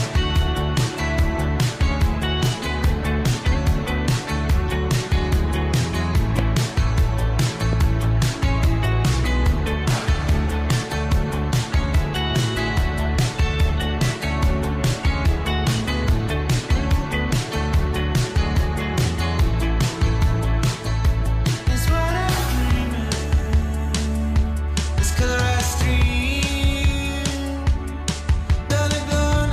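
A loud pop occurs at 6.39–6.41 s and again at 7.73–7.75 s, each a single sharp burst peaking around 10 dB above the surrounding sound, which continues underneath. A voltage step, likely from a plug, switch or static discharge, entered the signal chain.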